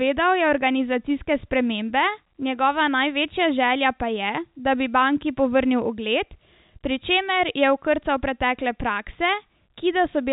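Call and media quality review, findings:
No audible faults found.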